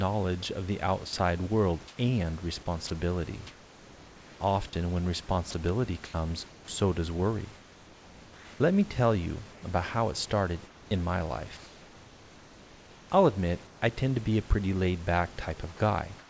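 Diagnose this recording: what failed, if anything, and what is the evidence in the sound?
Call processing, sound chopped by the voice detector: from 1.07 to 6.14 s, between "of the" and "so does", about 1.2 s of quiet syllable edges drop into flat fill. The spectrogram shows speech harmonics abruptly giving way to smooth, featureless noise bands. The likely cause is discontinuous transmission gating too eagerly.

Call processing, comfort noise in place of the background: from 7.55 to 13.82 s, between "so does" and "I tend to be", about 3.1 s of pauses carry steady synthetic noise, and again at 16.19 s it comes in about 4 dB quieter. On the spectrogram it appears as an even wash up to the 8 kHz cutoff, likely receiver-generated fill.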